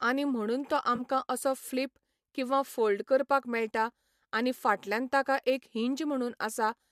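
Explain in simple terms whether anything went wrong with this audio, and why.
Two brief dropouts, both AAC frame loss with concealment. Around 0.96 to 1.01 s, between "आनी म्हणून तो" and "असो फ्लिप किंवा फोल्ड", roughly 30 ms of audio vanished and the decoder patched it with a smeared, noisy guess. At 4.86 s, just before "ताका एक", a shorter patch of about 10 ms does the same. The whole clip was also likely coded with low-delay AAC compression.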